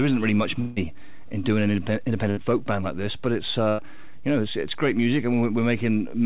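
At 0.60 s the sound gives way to a fading buzz-hiss that runs to about 0.78 s, then picks up again with roughly 160 ms simply gone. That's likely a long network dropout: nothing arrived, and the receiver stretched the last sound out to cover the gap.

Two shorter hiccups follow, a burst of packet loss each time. From 2.30 to 2.39 s about 60 ms goes missing, and from 3.69 to 3.80 s about 100 ms. In both, the last sound is held and faded before the audio jumps ahead.

All of it sits in a band with nothing above 4 kHz, which fits a G.711 call line.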